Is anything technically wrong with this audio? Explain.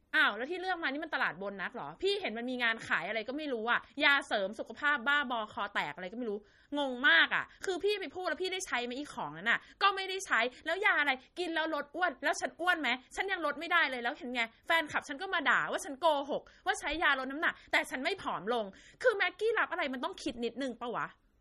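Yes. Throughout the speech, a starved encoder is at work, likely MP3 compression at a low bitrate, fitting roughly 33 kbps. It removes everything above 13.8 kHz and lets weak frequency lines flicker between frames, so the sound turns watery and swirly, with metallic chirps on s sounds.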